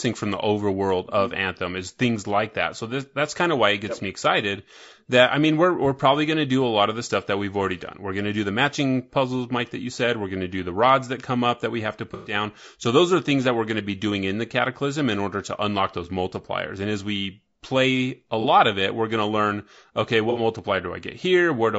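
Throughout the speech there is a rough, grainy texture, with noise filling the gaps between harmonics and a thin, synthetic-sounding top band. This is likely low-delay AAC compression (AAC-ELD) at a bitrate around 32 kbps. At this low bitrate the spectrum is coarsely quantized, which is why it sounds grainy rather than simply muffled.

AAC frame loss with concealment occurs at 12.14 to 12.34 s, 18.41 to 18.45 s and 20.30 to 20.39 s. The decoder fills each gap from the last good spectrum, so each one sounds like a smeared, phasey patch rather than a clean dropout to silence. The first is longest.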